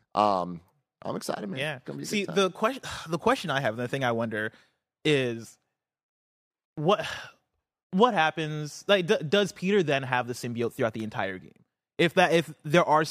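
Nothing in this speech recording points to a technical fault: the signal holds steady throughout, with no audible defect anywhere in the clip.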